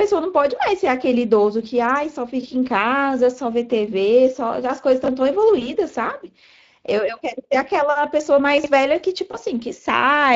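The whole recording has a hoarse, noisy grain on the speech, with a thin, hissy top end rather than real detail. That is Speex codec damage, plainly audible. The CELP coder is short of bits for the excitation, and the sound fits a setting around 20 kbps.

From 5.04 to 5.08 s there is a brief jumbled flicker. A stretch of about 20 ms plays one slot later than it should. These are chunks out of order: nothing is missing, but the misplaced piece leaves three hard joins.

Between 5.59 and 5.69 s the speech smears into a short buzz or coloured noise that fades, then sounds weak before it recovers. This is VoIP packet loss concealed by the speech codec. The loss is consistent with a single 20 ms frame, and the decoder extrapolated its last pitch and filter at falling gain.

From 8.58 to 8.66 s a second, longer chunks-out-of-order glitch jumbles the speech. Here a 20 ms chunk arrives about three chunks late.

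From 9.31 to 9.39 s the same fading concealment returns, pointing to another lost 20 ms frame.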